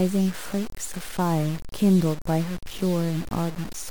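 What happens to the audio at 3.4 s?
The speech at 3.4 s, like the rest of the clip, likely went through low bit depth without dither: the samples were truncated to a coarse grid, which fits a 5-bit word, with no added noise to break up the rounding. The error therefore tracks the speech itself, sitting only about 15 dB below it, so the sound is harsh and grainy, and quieter parts crumble into gritty sputtering between steps rather than fading smoothly.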